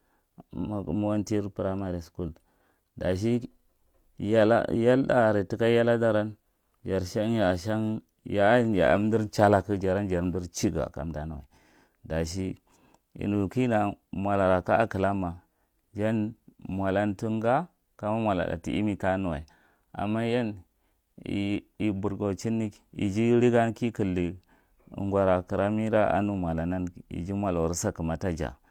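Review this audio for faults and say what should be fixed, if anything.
Nothing to fix: no faults found anywhere in the speech.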